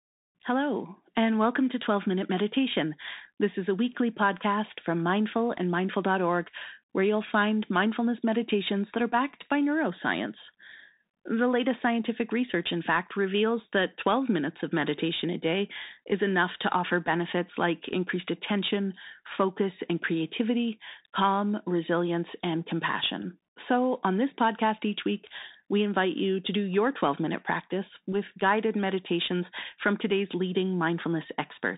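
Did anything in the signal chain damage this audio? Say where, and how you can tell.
Yes. Bluetooth CVSD headset codec, at the codec stage, throughout: nothing above 3.8 kHz, granular hiss, and scratchy s sounds where the one-bit adaptive step can't track fast changes.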